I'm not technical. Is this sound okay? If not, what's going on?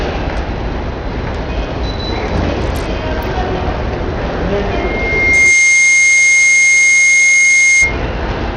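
No. Throughout, the sound is gritty and dull, with nothing above about 15.8 kHz. This is likely Bluetooth SBC compression, which squeezes audio hard for wireless sending.

From 4.77 to 7.98 s, a loudspeaker feedback squeal: a 2.1 kHz tone swells within a second until it's louder than everything else, because the microphone hears its own speaker.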